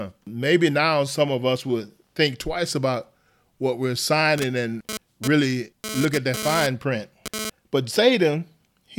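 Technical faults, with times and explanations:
4.38 to 7.50 s: GSM phone buzz. A hard, raspy buzz at about 217 Hz, rich in harmonics, sits over the speech at about 7 dB below it. It comes from a nearby 2G handset sending data in pulsed bursts; the audio circuitry rectifies the radio pulses and turns their repetition rate into an audible tone unrelated to the speech. Because the handset is in a data transfer rather than a call, the buzz comes and goes instead of holding steady.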